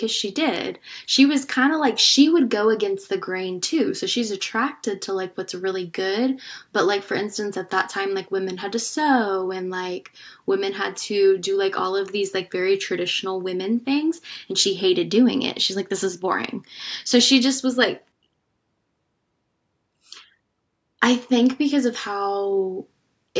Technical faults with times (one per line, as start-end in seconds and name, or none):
none